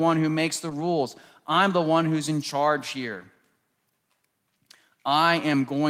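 A speech recording with one lost packet rebuilt from error correction, between 0.69 and 0.71 s. For those 20 ms the sound turns briefly rougher and noisier, but there is no dropout or silence. That fits a single packet going missing and the decoder playing the low-bitrate copy carried in the following packet (Opus in-band forward error correction). The copy fills the gap, but it is coarser than the original frame.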